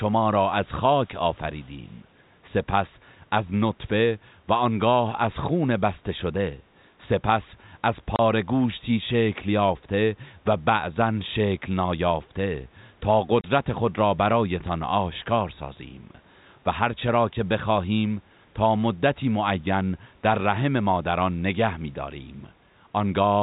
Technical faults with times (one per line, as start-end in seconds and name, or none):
1.58-1.67 echo leak
8.16-8.19 packet loss filled with silence
13.41-13.44 packet loss filled with silence